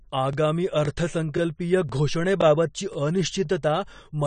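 Throughout, the speech sounds dull and smeared, with nothing above 9 kHz and a fizzy, warbling edge on sibilants. This is likely AAC compression at a low bitrate, around 32 kbps, where coarse quantisation lowers the bandwidth and thins the spectrum.

Overlapping chunks cause a brief stutter or click at 0.33, 0.85, 1.37, 1.89, 2.41, 2.93, 3.45 and 3.97 s. The audio was handled in 0.5 s chunks, each starting 20 ms before the previous one ended, so 20 ms replays at every join.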